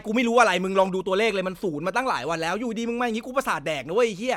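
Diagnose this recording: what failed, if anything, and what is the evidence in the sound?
Nothing in this speech recording points to a failure at any stage, so there's really nothing here to diagnose.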